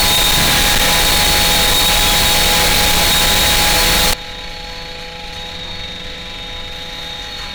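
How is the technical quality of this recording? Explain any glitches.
Quality is poor for the first 4.13 s, where a float-read-as-integer fault turns the sound into a harsh, very loud blare. From 0.0 to 4.13 s, 32-bit float samples were likely read as 32-bit integers, so each value is set by the sign and exponent bits. The waveform becomes a near-square block sitting at an almost fixed, high level whatever the original level, and a spectrogram shows dense broadband energy with background noise as strong as the foreground, though pitch can still be traced.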